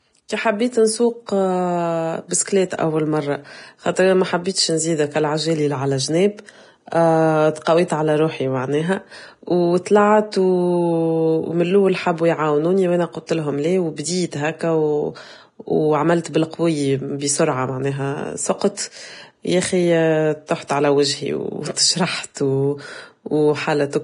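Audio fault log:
throughout: Vorbis compression, likely the cause of the heavy hiss and graininess across the speech, with nothing above 10.5 kHz; consistent with roughly 30 kbps.
7.64–7.67 s, 16.24 s, 22.34–22.36 s: pre-echo, a 17–22 ms hiss before attacks, ahead of "على روحي معناها وطلعت" and "بالقوية بسرعة معناها", from block-wide quantisation noise.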